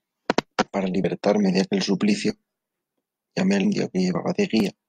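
At 1.00 to 1.05 s and again at 3.61 to 3.66 s the speech breaks into a brief glitch, damaged data in the compressed stream. The decoder hits corrupted frames, misreads them and loses sync until it finds the next good frame header.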